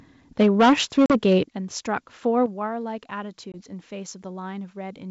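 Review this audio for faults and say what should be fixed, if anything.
From 0.39 to 1.38 s the peaks are flattened by microphone overload, running about 9 dB over and clipping around a sixth of the samples, likely from input gain set too high. Fix: lower the input level before the call so peaks keep headroom.

The microphone volume gets stepped down at 0.43, 1.44 and 2.46 s, by about 3, 9 and 6 dB. The level drops abruptly each time, likely the call software's automatic gain reacting to the clipping. Fix: set the level correctly up front so the software has no reason to keep cutting it.

There's packet loss on the ADPCM call at 1.06 to 1.13 s, about 40 ms gone, and at 3.52 to 3.56 s, about 20 ms. Each leaves a hard-edged silent hole, and the sound comes back slightly distorted while the decoder's predictor catches up with the sender's. The G.722 wideband coding itself sounds clean. Fix: use a steadier network path or add packet loss concealment with resets that resync the decoder.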